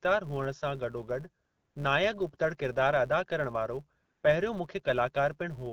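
From the first moment to the end, a filter restarted on every block lays a steady buzz at 172 Hz under the speech, which fits a 256-sample block. Each block starts from silence, so a small transient marks every block boundary. Unlike mains hum, this buzz swells and fades with the loudness of the speech, and its rate stays fixed whatever the pitch of the talker.

From 1.45 to 1.75 s and again from 4.01 to 4.23 s, AMR comfort noise takes over for about 300 ms and 220 ms. The phone treated these moments as silence and stopped sending speech frames, so the receiver filled each gap with synthetic noise built from a rough estimate of level and spectrum. The real background vanishes and a smooth, even hiss switches in, then out. That hard switching of a uniform texture separates it from a noise gate, which would drop to near silence instead.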